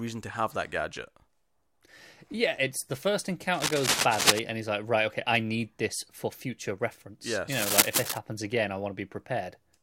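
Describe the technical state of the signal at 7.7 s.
At 7.7 s the speech is covered by cable scratch noise. It runs from 7.52 s to 8.18 s, about two thirds of a second. Dense, uneven bursts of crackle and rustle sit over the speech, somewhat louder than the speech itself. The likely cause is a worn cable or connector being moved. Its contact resistance jumps around rapidly, and those fluctuations ride straight into the signal as irregular noise.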